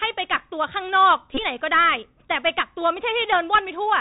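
Speech that sounds muffled and boxy, with scratchy s sounds and a granular hiss, points to the Bluetooth CVSD headset codec, which fits a 64 kbit/s stream and cuts everything above 4 kHz. Short buzzing stutters at 1.34 to 1.38 s, with about 34 ms lost over 45 ms and a run of roughly 20 ms, and again at 3.00 to 3.01 s with about 11 ms lost, come from a Bluetooth headset packet repeated: each lost packet is replaced by the previous one, so repeats every 3.75 ms buzz near 267 Hz.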